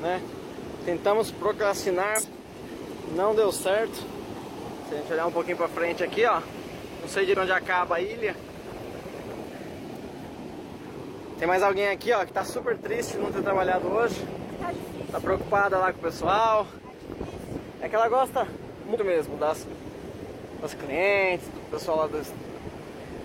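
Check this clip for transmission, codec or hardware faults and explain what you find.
Compressed frames skipped, five times: at 0.56, 2.14, 7.29, 14.49 and 18.90 s. Whole compressed frames were lost from the file or rejected by the decoder as damaged, so playback jumps forward. The gaps fit frames of about 46 ms, with a few frames dropped each time. About 150 to 300 ms of audio goes missing at each point. The sound lurches ahead at each of these points.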